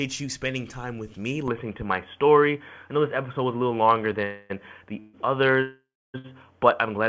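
At 1.48 s the recording most likely switched its input to a poorer device, perhaps a headset in call mode, with no gap at the switch. From there to the end nothing reaches above 3.4 kHz, where the call path had carried sound up to 8 kHz, as a 64 kbps G.722 link would. The sound turns boxy and dull at once, its level shifts by about 5 dB, and a faint new noise floor, roughly 55 dB under the signal, sits beneath it.

Three call audio freezes follow, each likely caused by packets held up in transit so that the jitter buffer ran dry. The receiver filled the wait by continuing the last sound, then resumed exactly where it stopped, so nothing is lost but gaps are inserted. The first, at 4.24 to 4.52 s, adds 257 ms of fading held sound. The second, at 5.00 to 5.16 s, adds 140 ms. The third, at 5.62 to 6.16 s, is the longest at 523 ms: the held sound decays and then about 280 ms of silence passes before the audio picks up again.

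Right after, at 6.18 to 6.26 s, comes a short stall from a late packet. One packet missed its slot, and the receiver stretched the preceding sound by 61 ms until it arrived, then carried on with nothing missing. The result is a brief unnatural hold with a slight buzzy dip, close behind the long freeze.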